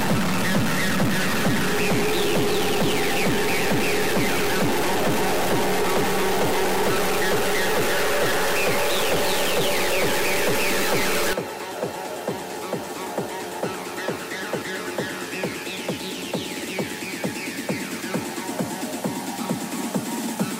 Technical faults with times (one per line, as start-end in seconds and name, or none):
0.00-11.33 stuck bit